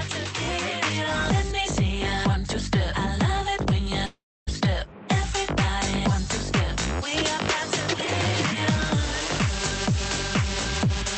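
The audio carries a likely long network dropout from 4.05 to 4.49 s: packets stopped arriving, so the receiver extended the last sound as a fading buzz, leaving about 0.29 s of silence, then resumed with roughly 0.42 s lost. It passed through a call path whose high end stops at 8 kHz, consistent with Opus at around 48 kbps.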